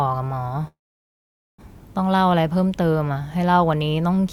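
Packets were likely held up in transit from 0.67 s, so the jitter buffer ran dry until 1.62 s, a call audio freeze. The last sound trails off briefly into about 0.83 s of silence. The speech then resumes where it stopped, with nothing lost, but about 0.91 s late.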